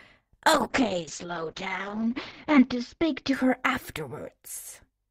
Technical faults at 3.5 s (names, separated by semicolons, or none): call bitrate drop